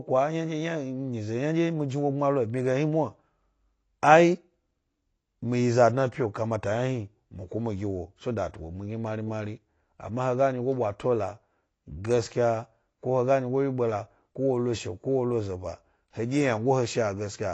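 Speech, likely squeezed through low-bitrate AAC compression throughout, fitting roughly 32 kbps: nothing above 8.6 kHz, so it sounds dull, smeared and fizzy on sibilants.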